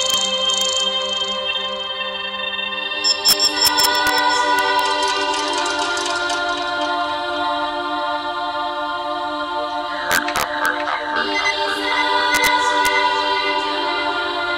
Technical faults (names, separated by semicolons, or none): integer overflow